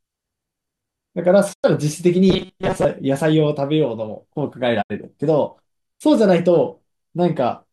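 At 1.52 s the speech fades over about 20 ms into silence and returns at 1.65 s. This is a digital broadcast dropout: the receiver stopped getting usable frames and muted until good ones arrived again. About 96 ms of programme is simply gone, which fits four lost frames of roughly 24 ms each.

From 2.29 to 2.85 s the speech turns into a stiff metallic buzz pitched at 188 Hz, still loosely tracking the speech's rhythm. This is robotic sound from repeated short buffers, likely caused by new audio arriving too slowly so that the last fragment of about 5.3 ms is looped to fill the gap. The loop length sets that fixed 188 Hz pitch, and most of the real audio in this stretch is skipped.

A second digital broadcast dropout comes at 4.81 s: again a 20 ms fade to silence, with sound resuming at 4.92 s. Here about 72 ms is lost, consistent with three missing frames.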